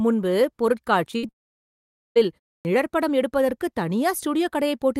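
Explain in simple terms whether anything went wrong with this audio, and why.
Several things go wrong in this speech clip, all within its first three seconds.

Short concealed packet loss occurs twice, at 1.11 to 1.15 s and at 1.27 to 1.31 s. Each time about 20 ms of audio failed to arrive in time. The receiver patched the hole by extending the sound just before it, then blended back into the real signal. The result is a tiny smear or wobble rather than a gap, and a very short sound at either spot may have been swallowed.

A burst of packet loss sits between those two, from 1.17 to 1.25 s. Here about 60 ms went missing in one run, too much for a seamless patch. The receiver kept the previous sound going and let it fade, so you hear a brief held buzz or dying hiss. The speech then picks up a little further on, with that slice of it gone.

A long network dropout follows at 1.31 s and lasts until 2.17 s, most of a second. 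The sound stops, and after a very brief fading continuation there is plain silence for roughly 0.8 s. The speech resumes at 2.17 s, but whatever was said during that stretch is simply absent. The likely cause is that the connection stopped delivering audio altogether for that period.

A clipped start after a pause happens at 2.61 s. The speech before it stops for about 0.3 s, and the output goes quiet during that pause. When the speech returns, about 40 ms of its beginning is cut off, so the next word starts abruptly from silence without its opening sound. This is what happens when the playback device nods off during a pause and wakes a moment too late.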